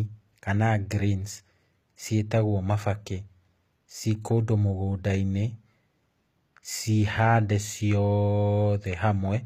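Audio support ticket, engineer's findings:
HE-AAC compression, throughout the clip. Treble sounds synthetic and gritty, s sounds lispy and metallic, nothing above 14.9 kHz. Likely spectral band replication rebuilding the top from copied lower bands, which fits a low bitrate near 24 kbps.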